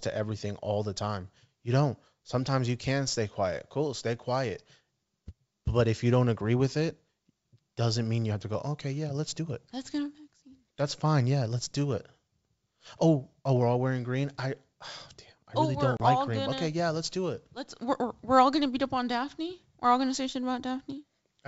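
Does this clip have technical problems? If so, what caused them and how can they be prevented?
Yes. At 15.97 s, right after "oh really oh", the speech drops out in a hard-edged hole of about 30 ms, and it resumes at 16.01 s with "like green". This is packet loss on an ADPCM call, here G.722 wideband coding. A few packets went missing and were filled with silence. The receiver's adaptive predictor and step size then no longer matched the sender's. So the speech comes back slightly distorted before settling within some tens of milliseconds. Prevention: carry the call over a less lossy network path with a jitter buffer and packet loss concealment that also resets the decoder state after a gap.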